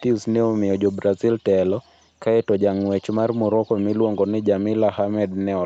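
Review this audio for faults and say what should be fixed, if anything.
Nothing here needs fixing; it's just speech that went through a normal call chain, with the highs stopping around 8 kHz as you'd expect from the call's microphone processing and Opus link.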